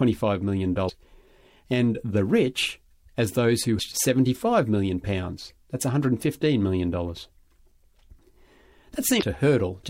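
Three short glitches from damaged data in the compressed stream break into the speech, at about 0.85 to 0.90 s, 3.75 to 3.80 s right after "rich as those who", and 9.19 to 9.23 s. Each lasts roughly 40 ms. Corrupted bytes make the decoder misread those frames and lose sync until it finds the next frame header, so you get a quick glitch in the speech.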